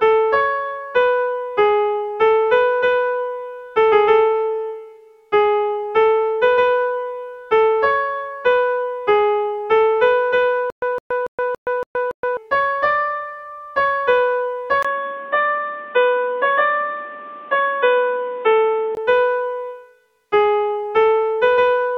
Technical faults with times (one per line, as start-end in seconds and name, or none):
10.70-12.37 stutter with silent gaps
14.83-18.97 input switched to a poorer device